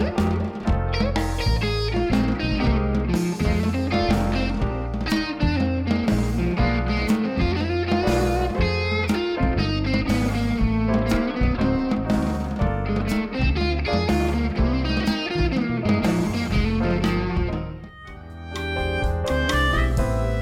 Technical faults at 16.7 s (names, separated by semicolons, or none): none